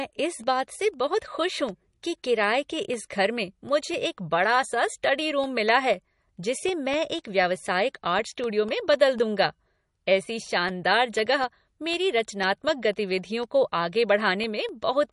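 Throughout the speech, the watery, swirly texture and the absence of anything above 11.1 kHz point to MP3 compression, likely at a low bitrate near 40 kbps. Weak frequency lines flicker between frames. Unlike a simple low-pass filter, the damage moves with the signal.

From 0.19 s to 14.94 s, periodic USB or driver dropouts tick every 0.25 s, about seventy in all. Each is a gap of roughly half a millisecond filled with silence. The strict regular spacing and the fact that they sound only during signal separate them from random clicks.

At 5.02 s a pre-echo puts a brief hiss, spread over 11 ms, just ahead of a sharp attack. The quantisation noise meant for the loud part spills into the quiet moment before it. A dropout removes sound; this adds noise ahead of the onset.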